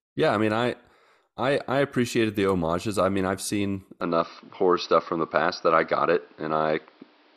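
Speech: right after "i mean i've seen", at 4.01 s, the sound turns dull and boxy through to the end with no gap, likely from the input switched to a poorer device. The spectrogram loses everything above 5.8 kHz and gains a faint new noise floor about 35 dB down, and the waveform level shifts by roughly 5 dB.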